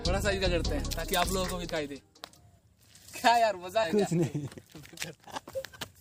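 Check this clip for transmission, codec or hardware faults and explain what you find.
There is one fault, compressed frames skipped, occurring three times. At 1.67 to 1.70 s, 3.83 to 3.85 s and 5.37 to 5.44 s the sound lurches forward, losing roughly 70 ms, 200 ms and 100 ms respectively. Whole frames of the encoded stream never reach the output, whether missing or rejected by the decoder as damaged, so playback jumps ahead. The jump sizes fit 20 ms frames.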